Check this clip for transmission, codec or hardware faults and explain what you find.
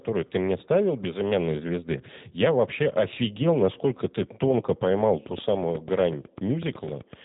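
Two faults show up here: codec damage over the whole clip, and a burst of clicks near the end.

The G.729 codec runs throughout at 8 kbit/s. Speech is rebuilt from a filter-and-pulse model, so it sounds rough and synthetic, with nothing above 3.8 kHz.

A train of clicks runs from 5.01 to 7.14 s: about twenty evenly spaced ticks at 8 per second, some 10 dB above the speech, likely from nearby interference.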